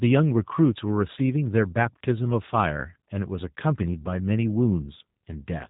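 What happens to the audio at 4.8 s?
At 4.8 s the speech is passing through a G.729 codec, as it does for the whole clip. The encoder models each 10 ms frame with a vocal tract filter, a pitch predictor and a handful of pulses, which fits an 8 kbit/s G.729A stream. Nothing above 4 kHz survives, so the speech sounds narrowband and muffled, and the sparse pulse excitation gives it a plainly rough, buzzy, synthetic quality.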